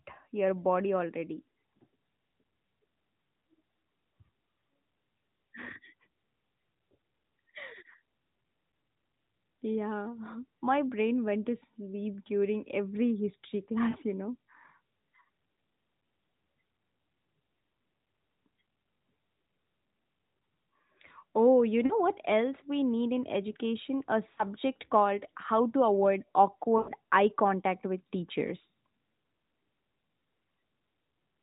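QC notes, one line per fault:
13.90–13.96 s, 21.86–21.96 s, 24.34–24.44 s, lost AMR speech frames: each is a short dip or warble, roughly 40 ms of lost sound, consistent with two 20 ms frames failing. The decoder repeats the last good pitch and vocal tract settings at falling gain, so the speech smears briefly rather than dropping out. On a spectrogram, harmonics flatten into a short constant-pitch streak below the 4 kHz ceiling. In the waveform, the envelope sags, then recovers.
26.78–26.91 s, lost AMR speech frames: a longer run of about 100 ms, matching about five frames. The concealment stretches one frozen sound that fades toward silence, then speech returns weak or rough. A spectrogram shows a smeared, decaying band of steady harmonics. The waveform shows amplitude tapering across the gap before rebuilding.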